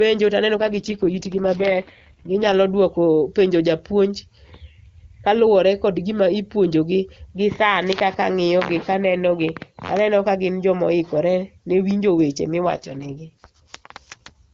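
Speech carried over AMR wideband shows two AMR rate drops, at 0.56 to 2.54 s and 12.63 to 14.36 s, where the voice turns rough and synthetic without losing bandwidth or gapping, consistent with a weak link forcing a fall from 23.85 to 6.6 kbit/s.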